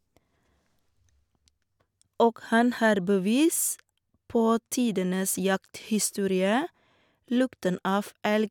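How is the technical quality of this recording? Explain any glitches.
No technical glitches can be heard in this recording.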